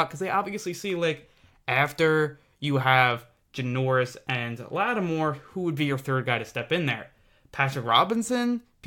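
Listening closely to the recording, nothing stood out as a technical fault at any point.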